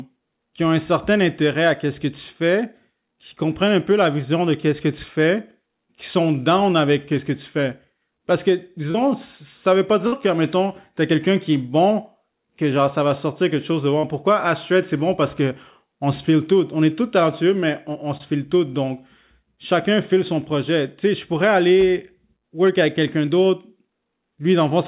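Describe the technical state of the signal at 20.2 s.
At 20.2 s the speech is intact, with no dropout, glitch or other fault; it carries only the narrow, telephone-like band of the call path, with nothing above 4 kHz.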